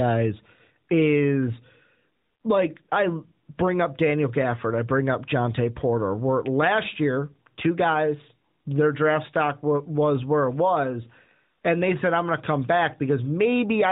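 Speech recording; no technical faults can be heard.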